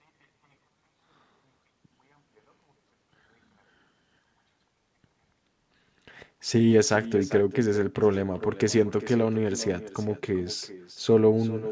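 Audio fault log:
throughout: echo with no canceller. Every phrase of the speech returns roughly 0.4 s later as a quieter, thinner copy about 16 dB down. The far end's loudspeaker is being picked up by its own microphone and sent straight back, with no canceller removing it. On the waveform, each burst of speech trails a smaller duplicate; on the spectrogram, faint repeats of the same harmonic patterns sit offset in time, all stopping at 8 kHz like the call audio itself.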